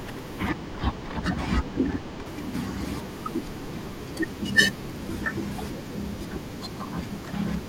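From 0.49 to 2.26 s, channel delay (comb filtering): a lag of about two samples notches near 10 kHz, sounding dull, with a dark spectrogram band.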